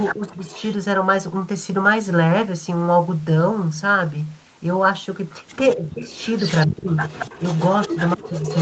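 Right from 0 to 0.75 s there's an echo leak, a copy of the speech trailing about 227 ms behind, about 10 dB below the speech. It's likely a loudspeaker echo the far end's canceller didn't fully remove. Within that, from 0.12 to 0.5 s, the speech ducks hard in what looks like speech suppressed in double talk, likely the canceller clamping down while both sides overlap. The echo comes back, a bit quieter, from 5.71 s to the end. The speech drops out again at 5.76–6.1, 6.66–6.97 and 7.88–8.43 s, each dip deeper, with the last nearly silent.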